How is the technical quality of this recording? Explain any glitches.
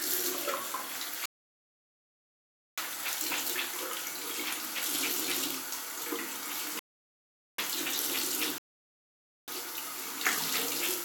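The recording is interrupted by three rebuffering stalls, at 1.26 to 2.78 s, 6.79 to 7.59 s and 8.58 to 9.48 s. Each time, playback exhausted its downloaded audio and halted until more data arrived. The sound drops abruptly to silence for about 1.5 s, 0.79 s and 0.9 s, then picks up exactly where it stopped. Nothing is skipped, but time is added.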